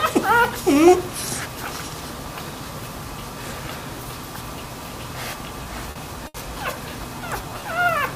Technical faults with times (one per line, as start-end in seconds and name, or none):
5.63-5.97 short stall from a late packet
6.27-6.36 short stall from a late packet
7.21-7.92 jitter buffer slow-down